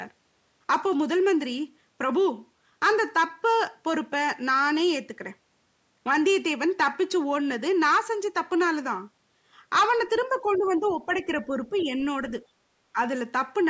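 The speech in this clip has gone through call microphone processing, with nothing above 8 kHz. It shows speech suppressed in double talk three times. The first is from 10.42 to 11.28 s. The level drops by roughly 10 dB at its deepest, for about half a second in total. The second is from 11.45 to 12.0 s. It dips by about 5 dB, for roughly 0.2 s. The third is a brief hole from 12.93 to 12.98 s, about 15 dB deep. The likely cause is an echo canceller that could not tell this talker from the loudspeaker echo while both sides spoke. So it turned everything down. The other side's voice leaking through is also audible, as faint scraps under the talker. They occur from 10.54 to 10.96 s, from 11.18 to 11.23 s and from 11.76 to 12.03 s. They sit about 25 to 30 dB below the speech. The likely cause is a far-end voice played on the talker's loudspeaker. The canceller did not fully remove it from the microphone. 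These scraps overlap the suppressed stretches, which fits both faults coming from the same moments of double talk.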